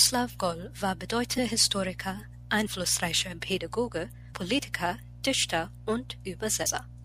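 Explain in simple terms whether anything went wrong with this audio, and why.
At 1.37, 2.65, 4.33 and 6.65 seconds the speech briefly smears and skips ahead, losing roughly a sixth of a second at the first jump and less at the others. These are compressed frames skipped: chunks of the compressed audio were missing or rejected, so playback jumped past them.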